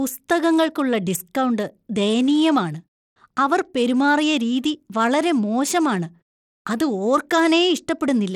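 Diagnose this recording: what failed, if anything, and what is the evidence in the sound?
Bluetooth SBC compression, likely, throughout the speech: a codec-stage fault. The top end flickers and stops near 18.9 kHz, with gritty noise and aliasing on the voice, which fits a low bitrate around 96 kbps. A small bit pool starves the upper sub-bands of bits and coarsely quantises the rest.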